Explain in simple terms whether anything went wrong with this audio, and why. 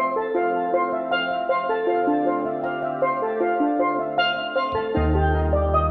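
Nothing went wrong here.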